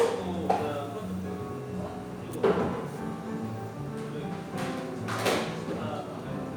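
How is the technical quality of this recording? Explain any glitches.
Nothing technically wrong can be heard in these sounds.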